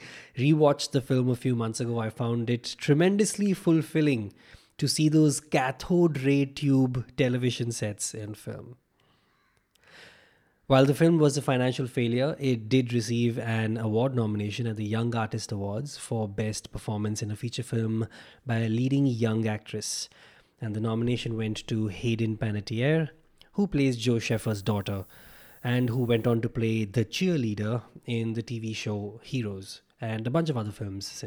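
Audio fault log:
24.31–26.35 s, low bit depth with noise shaping: a steady hiss, bright toward the top of the band, roughly 25 dB below the speech, ending just before "to play the cheerleader". The sound points to about 9-bit quantisation, with rounding error pushed upward in frequency.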